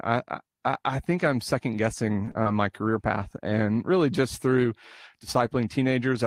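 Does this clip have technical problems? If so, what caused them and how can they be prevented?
Yes. Just after "I think I'm second", the speech briefly smears and wobbles three times in quick succession, at 2.25–2.29 s, 2.31–2.37 s and 2.43–2.47 s, before "my career path and". This is short concealed packet loss. About 20, 40 and 20 ms of audio reached the decoder too late to use, so the receiver covered each gap by extending the preceding sound for 18, 35 and 27 ms, then blended back into the real signal.

It can be prevented with a more stable network connection, a larger jitter buffer, or forward error correction so that lost packets can be rebuilt.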